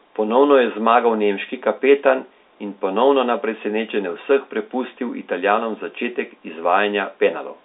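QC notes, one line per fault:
No faults are audible in the speech. The G.711 telephone coding path gives a narrow line band of roughly 250 Hz to 3.7 kHz, with nothing above about 3.8 kHz.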